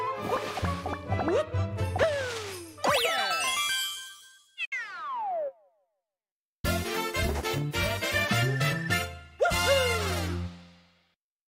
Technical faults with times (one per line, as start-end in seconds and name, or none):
4.65-4.73 digital broadcast dropout